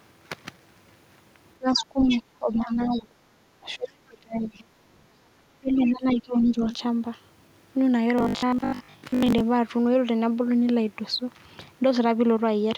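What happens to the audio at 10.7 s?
Nothing goes wrong at 10.7 s; the speech carries on intact through that moment.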